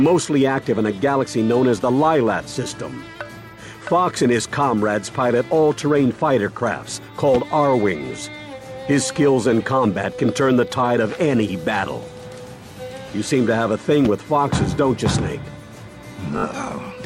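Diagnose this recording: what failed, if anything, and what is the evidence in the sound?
Repeated frames at the codec or storage stage: one 20 ms block, consistent with a single frame, replays three extra times at 16.37–16.44 s, stuttering and adding 60 ms.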